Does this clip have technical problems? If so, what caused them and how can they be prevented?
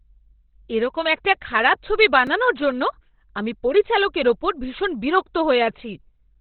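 Yes. Throughout, the speech is muffled and hoarse, with nothing above 4.3 kHz. This is likely heavy Opus compression in its speech mode, which fits roughly 12 kbps. Encoding at a higher bitrate prevents it.

At 2.27 s, a repeated buffer plays a tiny slice of audio twice. It sounds like a brief click, which fits a buffer of about 5 ms. Larger playback buffers prevent it.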